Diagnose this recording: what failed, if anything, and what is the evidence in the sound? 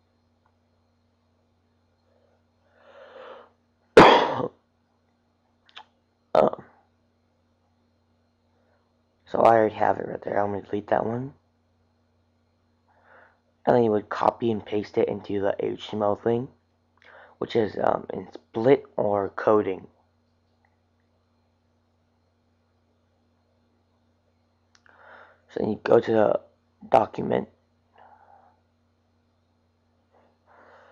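Nothing failed in this recording. No stage from capture through to playback leaves any trace in the sound, so there is nothing to diagnose.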